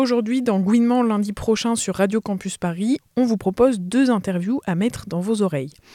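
Sample clock jitter runs through the whole clip: a fine hiss and roughness riding on the sound, swelling with loud, bright passages and vanishing in silence. The timing wobble is on the order of a microsecond or two, leaving an error floor roughly 40 dB below the signal. On a spectrogram this shows as a broadband haze that fills in around strong high-frequency content and clears completely in silence.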